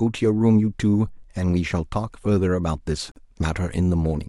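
Gap at a join of encoded pieces in this speech clip at 3.12 to 3.16 s: a 45 ms silence with smeared edges, left by untrimmed encoder delay and end-frame padding where separately encoded pieces meet.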